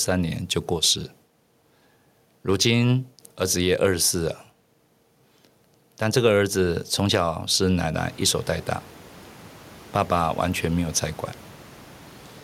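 Nothing stood out on listening to this speech clip; the room's background noise rises by about 22 dB at around eight seconds in but stays about 25 dB below the speech.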